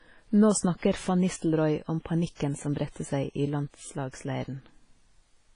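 Throughout the speech, the sound is heavily washy and ringing, with hiss that breathes with the signal and nothing above 10.1 kHz. The likely cause is WMA compression at a bitrate fitting about 24 kbps, spreading quantisation noise over long blocks and zeroing weak components.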